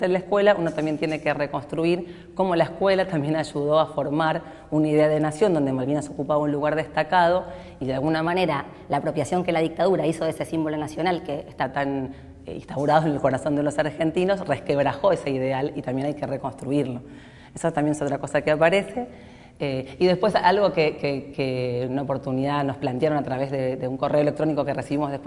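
Between 8.27 and 11.63 s, a wrong sample rate, consistent with 22 kHz audio played at 24 kHz, makes the sound 1.09 times faster and 1.47 semitones higher; spectrogram bands jump upward.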